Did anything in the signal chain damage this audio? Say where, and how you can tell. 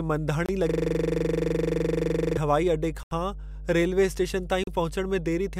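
Yes. A mains hum is present for the whole clip, introduced in the analogue wiring. A steady 50 Hz tone with low harmonics sits under the speech at roughly 10 dB below it. That points to a ground loop or a nearby transformer coupling the power line into the signal path before conversion, so it is baked into the recording.

A system hang loop at the driver or buffer stage runs from 0.69 to 2.37 s, ending just before "हवाई अॾे". One 42.7 ms slice of audio repeats exactly, around forty times, giving a rhythmic stutter at 23.4 Hz. The loop length fits a 2048-sample buffer. The host or driver stopped supplying new data while the hardware kept cycling through the same ring buffer.

There are three short dropouts to digital silence. The first is at 0.46 s and lasts 26 ms. The second is at 3.03 s, right after "हवाई अॾे", and lasts 81 ms. The third is at 4.64 s, after "रेल्वे स्टेशन", and lasts 36 ms. 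These are likely Bluetooth stalls on the playback link: interference delayed packets, the headphone buffer emptied, and audio paused until the resent data arrived.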